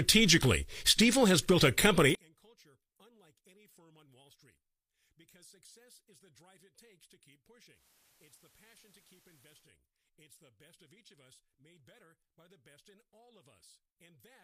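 At 0.43 to 0.45 s, a loose connector crackle: a worn or dirty contact briefly makes and breaks, chopping the signal and adding pops from any DC on the line. It comes through as a short, ragged burst of scratchy crackle.

From 2.15 s to the end, one channel has likely been inverted in polarity, so material common to both sides cancels when summed to mono. The centred speech drops by about 37 dB, leaving only a faint residue of the difference between channels.

From 7.70 to 9.73 s, a hybrid receiver loses its digital stream and blends to the FM analogue broadcast, then back, with cross-fades of 170 ms. During this stretch the level dips by about 2 dB, and hiss rises to roughly 35 dB below the speech.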